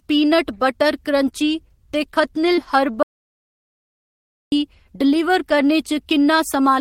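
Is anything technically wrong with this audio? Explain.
Yes, two faults are audible in this speech clip.

At 2.55 to 2.59 s, right after "पीनट बटर क्रंची ते", there is short concealed packet loss. A few hundredths of a second of audio arrived too late for the decoder, so the receiver carried the preceding sound forward for about 20 ms and then blended back into real audio, with roughly another 20 ms of material lost. The result is a brief smeared wobble rather than a hole. The sound never goes quiet, which separates it from a true dropout.

From 3.03 to 4.52 s there is an audio dropout to silence lasting about 1.49 s. The sound stops mid-flow and returns abruptly, and the gap is silent with no room tone at all. The likely cause is that the input was lost, through a disconnected device, a failed link or an accidental mute, while recording carried on writing silence. Unlike concealment, nothing fills the gap, and whatever was said during it is gone.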